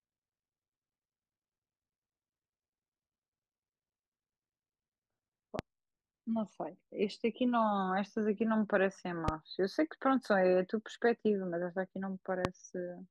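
At 5.59–5.61 s, 9.28–9.31 s and 12.45–12.47 s, a loud pop sits on the speech: a single sharp click about 20 ms long, around 15 dB above the signal, the last nearer 20 dB. A brief voltage spike, likely static or a switching transient, was added while speech continued underneath.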